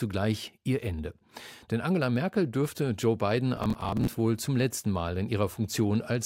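Processor overload crackle runs from 3.56 to 4.13 s, ending just before "wohl zum letzten". The processor repeatedly failed to finish its buffers of around 10 ms on time, roughly twenty of them, each replaced by a hard-edged scrap of old audio, heard as gritty tearing over the speech.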